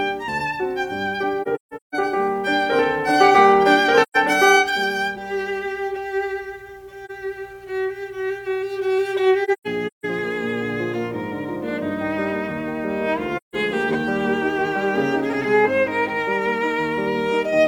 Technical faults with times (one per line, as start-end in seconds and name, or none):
1.42-1.95 AAC frame loss with muting
4.02-4.17 AAC frame loss with muting
7.05-7.11 AAC frame loss with muting
9.44-10.05 AAC frame loss with muting
13.36-13.55 AAC frame loss with muting